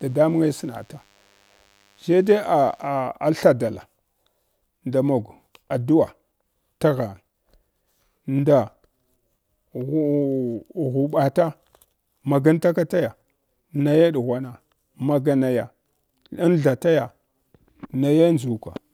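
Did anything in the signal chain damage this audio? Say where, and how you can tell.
Yes: DECT cordless phone buzz in the analogue wiring, 0 to 2.9 s. A thin 100 Hz buzz, roughly 40 dB below the speech, from rectified radio bursts every 10 ms.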